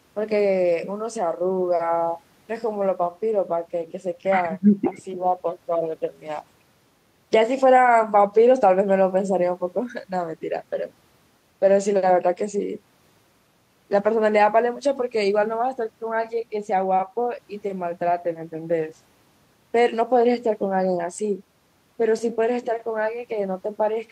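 No technical faults can be heard anywhere in the speech. There is nothing to place in time or describe.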